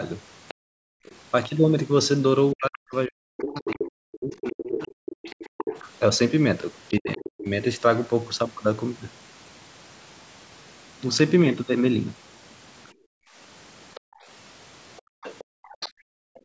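From 0.48 to 1.16 s, a second, fainter voice sits under the speech, roughly 20 dB down. This is the other side's voice leaking through. It is likely loudspeaker echo that the canceller failed to remove. From 0.59 to 0.69 s, the main speech drops sharply, by around 40 dB. This is speech suppressed in double talk. Both sides were active, and the canceller likely turned everything down. From 0.97 to 1.05 s, the room sound falls away by about 38 dB. This is background gated by the echo canceller. It clamped the microphone while the loudspeaker played, then let go.

From 2.53 to 4.9 s, the speech dips again, for about two seconds in total. The leak returns from 3.66 to 7.39 s. It is louder this time, only around 10 dB under the speech. Another suppression hits from 6.99 to 7.48 s, close to 35 dB deep. From 12.86 to 16.4 s, the faint echo is back, about 20 dB down. The background is gated from 12.93 s to the end, around a second and a half in total, dropping by up to about 40 dB.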